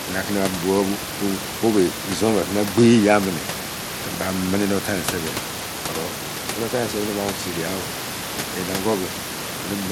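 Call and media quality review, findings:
Speech, full length: plainly audible gritty treble, unstable sibilants, nothing above 17 kHz. Likely Bluetooth SBC compression with a starved bit pool (fits about 96 kbps): top sub-bands dropped, the rest coarsely quantised. Spectrogram: flat ceiling at 17 kHz, blotchy flickering patches beneath. Room noise sits about 12 dB under the speech.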